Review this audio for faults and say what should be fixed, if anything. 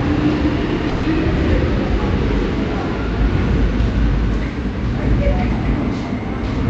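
A call audio freeze runs from 0.89 to 1.05 s: the last sound is stretched into a fading buzz for about 140 ms, and the sound then resumes where it stopped, about 140 ms late. Nothing is skipped, which separates it from a packet-loss dropout. The likely cause is a late packet burst draining the jitter buffer. A deeper, adaptive jitter buffer on the receiving end would prevent it.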